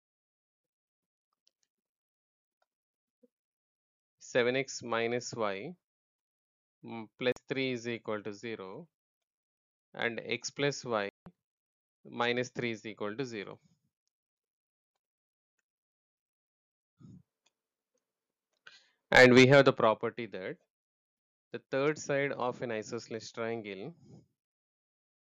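At 7.32 s the sound drops to silence for about 43 ms, then again at 11.09 s for about 171 ms and at 16.84 s for about 131 ms, each time resuming afterwards. These are Bluetooth stalls, likely caused by radio interference delaying packets so the headphones' small buffer emptied and playback halted until the retransmitted audio arrived. The longer gaps at 11.09 s and 16.84 s mean the link took longer to recover.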